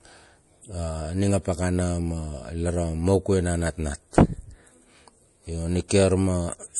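Throughout the speech, MP3 compression is likely at work: nothing survives above 11.4 kHz, and weak frequency lines flicker in and out, giving a plainly audible watery swirl that fits a bitrate around 48 kbps. A simple low-pass filter would dull the top without that swirl.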